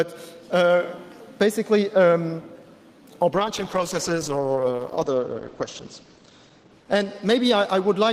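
A call bitrate drop begins at 3.32 s and lasts to the end of the audio. Content above about 8 kHz disappears and detail becomes coarser, which points to the encoder falling from about 48 kbps to about 10 kbps, holding its lowest rate for 2.65 s without recovering.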